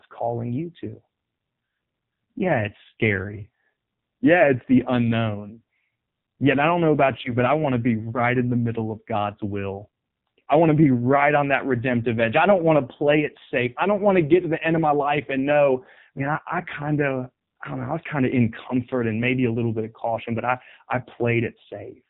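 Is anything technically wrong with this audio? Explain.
Yes, two related faults are audible.

Throughout the speech, AMR narrowband mobile codec compression leaves a buzzy, synthetic voice. The spectrogram shows nothing above 4 kHz, and the heavy smearing fits AMR-NB's low 5.9 kbps mode.

From 7.22 to 7.35 s, between "I don't know about" and "but I want to", lost AMR speech frames cause a brief warbling dip. This fits one lost 20 ms frame. The decoder repeated its last pitch and vocal-tract settings at falling gain, which shows as a short sag in the waveform envelope.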